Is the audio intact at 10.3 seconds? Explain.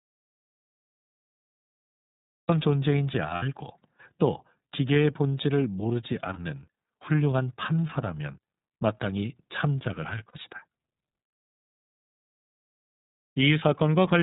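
No. Lost iLBC frames cut out the sound from 10.28 to 10.36 s, a gap of about 60 ms, which fits two 30 ms frames. The decoder fills the hole by repeating the last pitch cycle mixed with noise, so it is heard as a brief held, slightly buzzy vowel. Because each iLBC frame is decoded independently, normal sound returns almost immediately afterward.

The iLBC codec also shapes this moment, as it does the whole clip. It passes nothing above 4 kHz and codes each frame's excitation separately, giving plainly audible roughness and a synthetic edge consistent with its 13.33 kbps, 30 ms mode.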